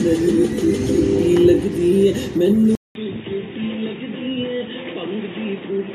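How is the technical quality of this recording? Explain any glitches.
The recording degrades partway through. At 2.75 s the sound cuts out for 200 ms, then returns dull and boxy, slightly quieter, with a faint new hiss and nothing above 3.8 kHz until the end. The input likely switched to a poorer device, which passes a narrower band and adds its own noise.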